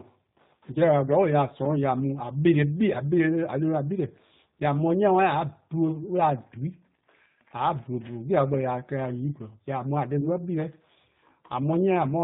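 A speech recording that has gone through the G.729 codec from start to finish. The sound is band-limited, with nothing above 4 kHz. The voice is intelligible but plainly rough and slightly synthetic. That fits the 8 kbit/s rate of this codec. It does not store the waveform. It models each 10 ms frame with a vocal tract filter, a pitch predictor and a few pulses, so fine detail is lost. There are two short gaps from VoIP packet loss concealed by the speech codec, at 0.73 to 0.78 s and at 10.21 to 10.28 s. Each sounds like about 20 ms of missing audio, which points to a single lost packet. The decoder fills each hole by carrying its last pitch and filter forward at falling gain. The result is a brief buzzy or noisy patch that fades. The voice stays weak or distorted for a few tens of milliseconds after each gap while the decoder recovers.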